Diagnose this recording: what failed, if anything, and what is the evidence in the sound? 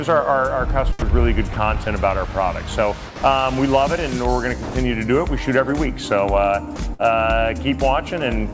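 Sound dropped by the voice detector, at the call-processing stage: the sender's detector likely mistook real sound for background and stopped sending, so comfort noise was played in its place. The sound gives way to steady noise at 0.99 s for 30 ms, from 3.07 to 3.22 s, and from 4.63 to 4.75 s, then returns.

Sound chopped by the voice detector, also in call processing: the detector likely switched between sending and muting more than once from 1.53 to 1.87 s and from 6.76 to 7.06 s. Brief fragments were swapped for comfort noise, so the sound turns choppy. All of this is heard through a band that stops at 8 kHz, which fits the G.722 codec on the call path.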